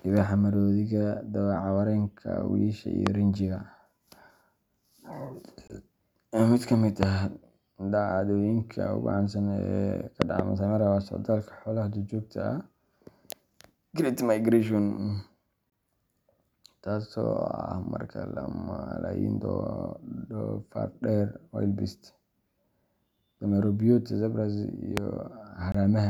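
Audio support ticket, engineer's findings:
Loud pop at 3.07 s after "wiyisha iyo", 7.03 s between "ka mid" and "ah dhacdooyinka ugu caansan", 10.22–10.42 s (double) after "ugu caansan ee ka", and 24.97 s. Sharp transients about 20 dB above the signal; likely a voltage step from a connector, switch or driver glitch.

Gap between chunks at 5.68 s, 15.70 s and 25.72 s. Hard-edged 23 ms silences every 10 s. Chunk joins padded or started late.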